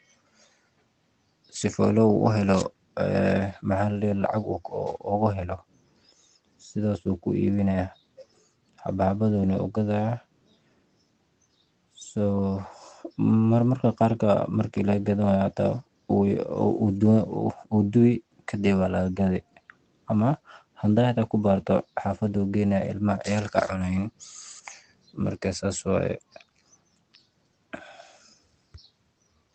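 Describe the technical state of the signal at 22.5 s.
At 22.5 s the speech is intact, with no fault at that moment, though it still carries the ordinary coding texture of the call path and its top end stops at about 8 kHz.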